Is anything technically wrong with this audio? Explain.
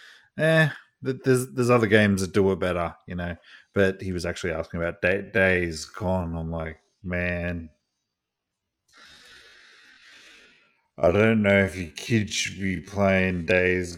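Yes. From 5.12 s to the end, the speech is a time-stretched section, slowed to about 0.58 times its original pace while its pitch stays put. This is likely software lengthening the audio to fill a duration by repeating short overlapping pieces. The pace changes abruptly and the speech drags. On a spectrogram, harmonics keep their spacing but stretch horizontally, with blurred onsets. The waveform shows drawn-out syllables.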